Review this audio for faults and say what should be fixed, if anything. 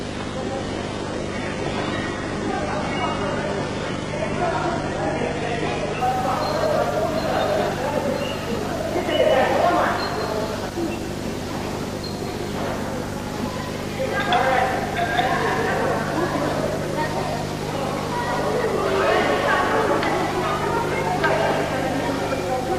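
An adaptive stream starting at a low bitrate: the player began on a low rung of the stream to get playback going fast, then stepped up once it had measured the connection. From 0.0 to 6.0 s the treble is thin and partly synthetic, with nothing above 11 kHz and stronger codec artefacts, which fits HE-AAC at about 12 kbit/s. At 6.0 s the quality jumps with no gap, consistent with a move to AAC-LC at about 96 kbit/s. Buffering long enough to measure bandwidth before playback, or opening on a higher rung, would prevent it.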